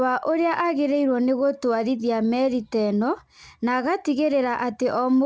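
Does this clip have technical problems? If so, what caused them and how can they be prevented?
No, nothing in this speech clip needs fixing; it just carries the ordinary sound of a call link, with nothing above about 8 kHz, which fits a wideband codec such as G.722.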